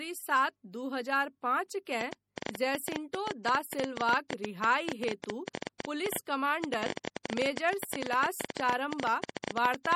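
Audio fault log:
throughout, MP3 compression: The audio was likely squeezed through an MP3 encoder with too few bits, consistent with a bitrate around 48 kbps. Short of bits, the encoder discards weaker frequency lines frame by frame, so they flicker in and out, and it removes everything above 17.2 kHz. The damage is plainly audible: the speech takes on a watery, swirling quality, sibilants chirp metallically, onsets are smeared, and the very top of the treble is missing.
2.01–9.94 s, train of clicks: Beginning just after "सात दू हजार पाँच", a repeating pulse, likely from interference by nearby equipment or from a faulty connection or power supply, is added to the signal. About a hundred similar clicks arrive at an uneven pace averaging 11.6 per second, standing roughly 15 dB above the speech. They are heard as irregular ticking laid over the speech and continuing through the pauses until the end.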